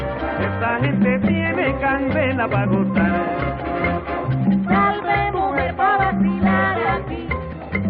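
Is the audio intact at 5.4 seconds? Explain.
Yes, at 5.4 seconds the audio is intact, with no dropout, click, distortion or other fault at that moment.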